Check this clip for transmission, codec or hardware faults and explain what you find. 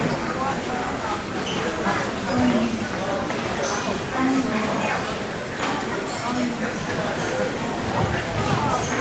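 No transmission, codec or hardware faults can be heard: the audio carries the ordinary character of a call connection, with the lowest bass trimmed by the microphone's high-pass filter and nothing above about 8 kHz, which fits a wideband call codec working as intended.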